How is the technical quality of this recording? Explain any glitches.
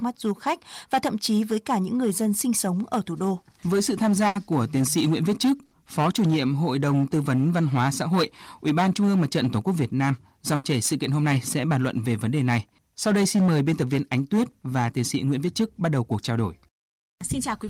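The recording has two problems: hard clipping throughout and three short dropouts from packet loss.

Hard clipping runs through the whole clip. The signal was driven about 11 dB past what a stage could pass, flattening roughly 7 percent of samples and giving loud sounds a fuzzy crackle. Unlike codec distortion, this fuzz tracks loudness.

Bursts of packet loss occur at 4.27 to 4.37 s, 5.65 to 5.73 s and 10.55 to 10.65 s. The receiver filled gaps of 80, 60 and 80 ms by extending and fading the last sound. Unlike a clean dropout to silence, you hear a held buzz or fading hiss, then a jump past the missing audio.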